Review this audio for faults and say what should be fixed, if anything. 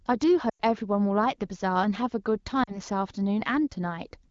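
There are lost AMR speech frames at 0.49 to 0.61 s and again at 2.63 to 2.76 s. The first gap runs about 100 ms, which fits five 20 ms frames failing their checks. The second points to about two frames. The AMR-WB decoder covers each gap by reusing the last good pitch and vocal-tract settings while the gain drops, so the speech smears and fades out quickly, then returns a touch weak or rough. The fix is better radio coverage, or stronger channel coding and error protection on that link.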